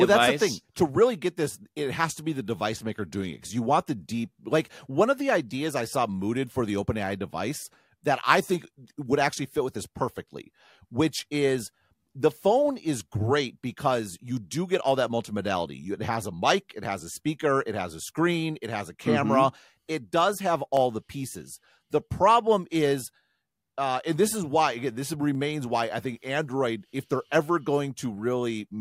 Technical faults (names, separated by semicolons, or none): dropped samples